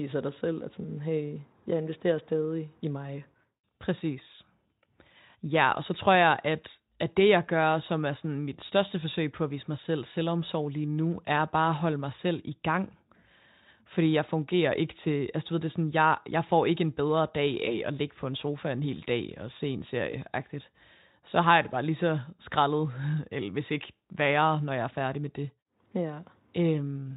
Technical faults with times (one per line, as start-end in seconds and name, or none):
17.65-17.79 VoIP packet loss concealed by the speech codec
20.11-20.14 VoIP packet loss concealed by the speech codec